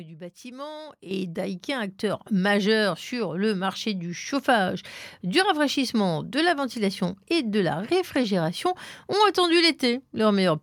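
At 1.11 s, just after "du bâtiment", the microphone volume stepped up: the call software judged the input too quiet and raised the device's gain by about 10 dB in a single step, so voice and background noise jump abruptly louder together.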